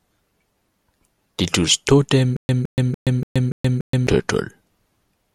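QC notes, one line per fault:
2.37–4.07 s stutter with silent gaps: a 164 ms burst repeats six times, every 289 ms, with 125 ms of silence between; likely a stalled stream replaying one fragment.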